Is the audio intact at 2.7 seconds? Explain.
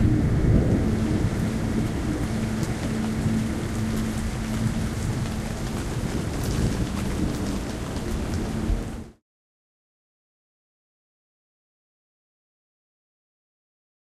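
Yes, the audio is intact at 2.7 seconds, with no dropout, click or other fault at that point.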